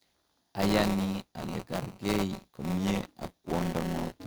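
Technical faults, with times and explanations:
Throughout, buffer tearing: a robotic 188 Hz buzz rides the speech as each buffer period splices in a sliver of older audio, which fits a 256-sample buffer.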